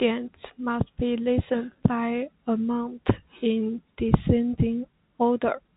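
No technical fault can be heard in this speech recording, which comes through a G.711 telephone path working as expected, with its usual narrow band that stops below 4 kHz and at most a faint level-following quantisation noise.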